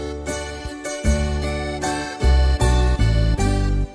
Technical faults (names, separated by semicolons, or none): none